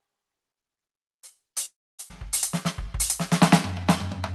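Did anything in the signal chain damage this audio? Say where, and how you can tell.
Yes. At the network and jitter-buffer stage there is a call audio freeze from 1.65 to 2.01 s. The music stops and is stretched into a fading fill for about 330 ms, with roughly 270 ms of that silent, before it resumes from where it left off. Nothing is lost, but a gap of about 330 ms has been inserted. The likely cause is packets held up in transit while the jitter buffer ran dry.

A skip ahead follows at 2.09 to 2.12 s, also at the network and jitter-buffer stage. Playback jumps forward over a very short 12 ms join, and roughly 200 ms of music is missing. The two sides are butted almost directly together. A stretch of audio was dropped, either in transit or by the jitter buffer as it overflowed, while later audio was already waiting, pulling the delay back down by about 200 ms.

In the same jitter buffer, a jitter buffer slow-down runs from 3.75 to 4.33 s. 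The music plays at about 90% speed with its pitch unchanged, and sustained sounds are drawn out. Single pitch periods were repeated back to back, adding 66 ms, so the buffer could rebuild its reserve. The Opus call path underneath adds its normal coding texture, and the top end stops around 12 kHz.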